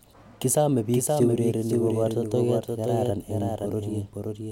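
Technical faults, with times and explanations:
Throughout, doubled audio track: every stretch of speech comes back about half a second later as a second full-band copy, roughly 5 dB quieter. It has no decay or room colour. The likely cause is the same signal reaching the mix twice, once through a slower path. On a spectrogram, each harmonic pattern reappears intact, shifted right by that fixed gap. The waveform shows a fainter duplicate envelope trailing the original.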